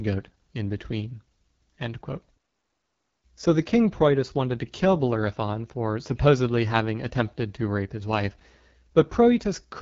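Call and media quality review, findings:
AMR wideband (HD Voice) codec damage, whole clip. Speech rough and raspy throughout. Nothing above 7.3 kHz. Top band is shaped noise, not real speech detail. Roughness points to a low AMR-WB mode, consistent with 8.85 kbit/s, too few bits for the excitation pulses.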